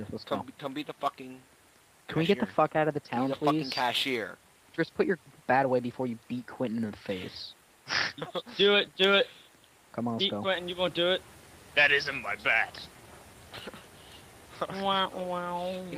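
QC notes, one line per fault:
No technical faults are audible; the signal holds steady in level and continuity for its full duration, with nothing that points to a problem in capture, transmission or playback.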